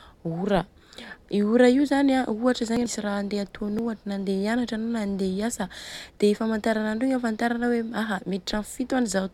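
At 2.77 s to 2.86 s, just before "raha handeha", compressed frames are skipped and roughly half a second of speech is lost. A second skip follows at 3.69 s to 3.88 s, right after "raha handeha", this time losing about a tenth of a second. In both cases the decoder never plays whole frames, so the audio jumps forward by a multiple of the frame length.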